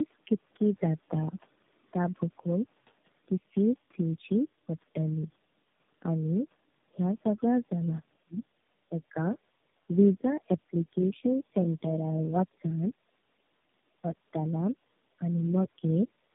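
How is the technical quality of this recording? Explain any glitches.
The speech is muffled, rough and warbly for the whole 16 seconds, with a few brief dips and one faint intrusion.

Tandem speech coding runs throughout. The voice lacks any content above 3.8 kHz and has a grainy, watery texture that is heavier than one narrowband codec would leave. The sound points to three AMR-type speech coders in series, with G.711 links between them. Each coder re-encodes the previous one's damaged output, so the roughness and warble build up at every hop, and the lowest-rate stage sets the floor.

Speech suppressed in double talk occurs three times. From 8.23 to 8.43 s the voice drops out almost completely for about a fifth of a second. From 8.89 to 9.15 s there is only a slight dip in level. From 15.18 to 15.26 s a short, moderate dip briefly lowers the voice. The likely cause is an echo canceller that hears both sides at once, cannot tell this talker from loudspeaker echo, and turns everything down.

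Other side's voice leaking through appears from 11.08 to 11.12 s. It is a tiny scrap of a second voice, very faint and far below the main speech. The likely cause is the far end's audio playing from the talker's loudspeaker and reaching the microphone, with the echo canceller failing to remove that fragment.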